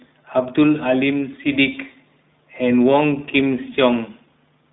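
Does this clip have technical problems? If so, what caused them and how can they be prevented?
Yes. The whole recording has gone through the iLBC codec. Band limiting confines the speech to roughly 150 Hz to 3.7 kHz. Each 20 ms frame is coded independently, which fits the 15.2 kbps mode and leaves plainly audible roughness and a synthetic edge. To prevent this, record or transmit through a wideband codec at an adequate bitrate rather than a narrowband VoIP path.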